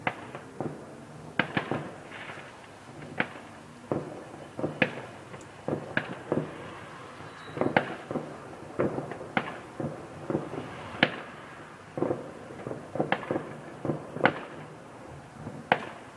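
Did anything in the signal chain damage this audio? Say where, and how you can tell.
No, nothing in the signal chain damaged this audio, at any stage.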